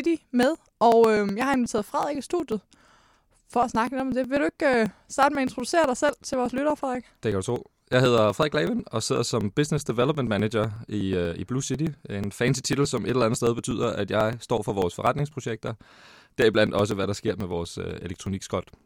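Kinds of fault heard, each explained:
Periodic USB or driver dropouts: something is stalling the USB bus or the audio driver on a steady cycle, and each stall throws away a tiny slice of the signal, roughly a couple of milliseconds, skipped outright rather than filled with silence. Here it repeats every 0.123 s, about eight times a second, from 0.06 s right through to 18.76 s, so you get a steady ticking laid over the speech, heard only while there's sound to cut into.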